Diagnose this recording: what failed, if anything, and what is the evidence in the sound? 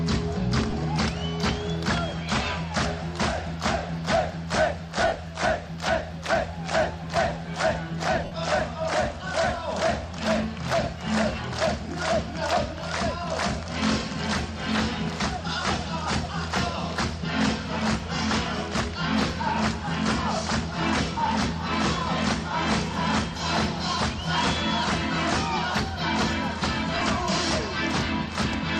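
Lost LE Audio frames on the Bluetooth link: at 0.70, 5.07–5.12, 8.25–8.32 and 26.95–27.02 s, LC3 concealment replays the spectrum with random signs, smearing tones into noise.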